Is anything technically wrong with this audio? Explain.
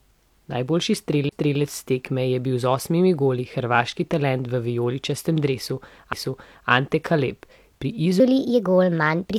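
Yes, there are three faults: two CD skips and a section at the wrong speed.

CD skips: From 1.29 to 1.32 s, just before "tekme je bil z", there is a tick and a mute of a few tens of milliseconds, and then the speech resumes from a different point rather than continuing smoothly. At 6.13 s, right after "hrvaški talent v vijoličastem", a second, much shorter dropout of only a couple of milliseconds clicks past before playback picks up elsewhere. In both cases the laser has jumped to another turn of the disc's spiral, so the player briefly silences its output while it relocks and then carries on from the new position.

Section at the wrong speed: From 8.2 s to the end, the speech turns noticeably higher and more hurried. It plays at 1.26 times normal speed, which lifts the pitch by roughly four semitones, and speed and pitch jump together from that moment on. The likely cause is that this final stretch was clocked or resampled at the wrong rate during editing or playback, so it runs faster than it was recorded.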